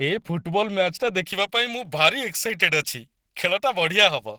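Speech runs through the whole recording with a rough, grainy texture and a muffled, hoarse quality. Tones break into noise. This points to Opus compression at a low rate, likely in its hybrid mode, where a speech-style core handles the lower band and the upper bands are filled from folded or noise-based energy. The damage is plainly audible and fits a rate around 16 kbps, though the band still reaches about 20.2 kHz. From 1.24 s to the end, the sound turns thin, bright and sibilant, with the top end pushed forward relative to the first second. That is pre-emphasis left on: a treble boost applied for recording or transmission whose matching de-emphasis cut was never applied. The highs sit about 11 dB up at 10 kHz against 1 kHz, which fits a J.17 curve.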